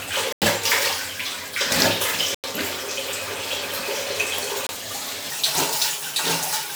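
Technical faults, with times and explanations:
0.33–0.42 s, 2.35–2.44 s, 4.67–4.69 s: block of digital silence. The output buffer likely went unfilled, leaving hard-edged gaps of about 93, 93 and 23 ms, which fits 4096- and 1024-sample buffers.
5.3 s to the end: section at the wrong speed. Playback runs 1.6 times too fast, likely from a wrong clock, raising pitch about seven semitones and hurrying everything together.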